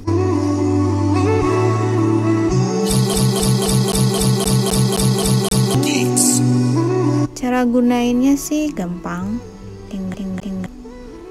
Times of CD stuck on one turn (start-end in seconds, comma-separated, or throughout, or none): 3.14-5.75, 10.14-10.66